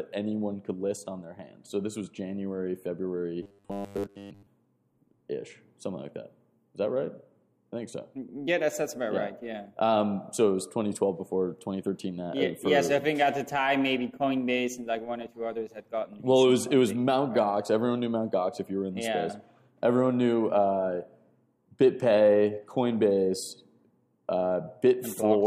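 From about 3.43 to 4.47 s the audio turns into a stiff, metallic buzz pinned at 100 Hz: robotic sound from repeated short buffers. It's likely that fresh audio was arriving late, so the same 10 ms chunk kept getting replayed for most of that stretch while the real signal was skipped.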